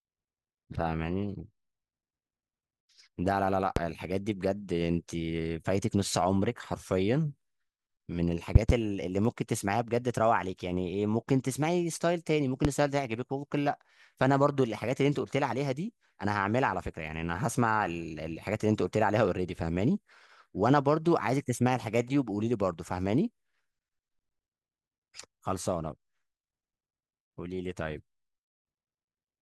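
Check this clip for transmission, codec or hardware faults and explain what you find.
Loud pops occur three times: a single pop at 3.76–3.80 s, a double pop at 8.55–8.73 s, and another single pop at 12.65–12.68 s. Each stands roughly 20 to 25 dB above the speech. A voltage pulse from a switch, plug or static likely entered the signal path, and the following circuitry shaped it into a thump. Unlike a dropout or digital click, the speech carries on uninterrupted underneath.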